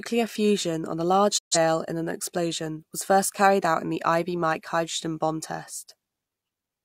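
At 1.37 s the speech drops out in a digital broadcast dropout. The receiver stopped getting valid frames and muted, so the sound fades out over about 20 ms. Roughly 128 ms is simply missing, which fits about three lost frames, before audio resumes at 1.57 s.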